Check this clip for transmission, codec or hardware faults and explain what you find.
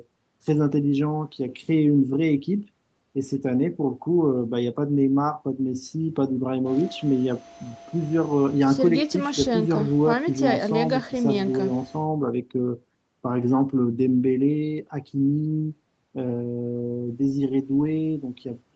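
No transmission, codec or hardware faults can be heard.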